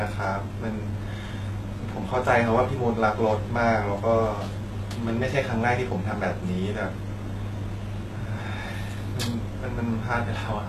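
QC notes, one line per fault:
Throughout, HE-AAC compression: the speech sounds plainly coded, with gritty, metallic s sounds and nothing above 12.3 kHz. The likely cause is HE-AAC at a low bitrate, around 16 kbps, rebuilding treble by copying lower bands upward, so harmonics misalign across the crossover.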